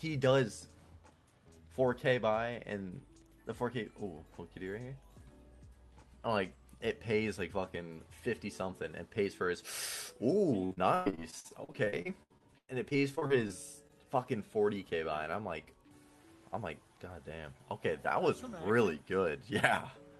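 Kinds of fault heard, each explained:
Repeated packet loss (robotic sound): Over and over between 10.65 and 13.51 s, audio packets failed to arrive in time. The receiver patched each hole by stretching out the last sound, and the next hole came soon after. Around twenty gaps, the longest 111 ms, leave about a quarter of that stretch synthesised, so the sound turns choppy and robotic, with pieces missing.
Short concealed packet loss: Around 13.87 to 13.91 s, a single sliver of roughly 20 ms failed to reach the decoder in time. The receiver filled the hole by carrying the preceding sound forward, from its pitch or as shaped noise, before blending back into the real signal. Coming just after the robotic stretch, it shows up as a brief smear or wobble rather than a clean continuation.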